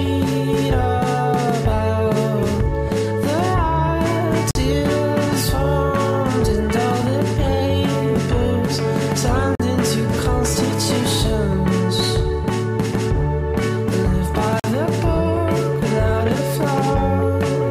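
Audio sent in 5-second chunks shows a gap between chunks: each join inserts silence, leaving 44 ms holes at 4.51, 9.55 and 14.60 s.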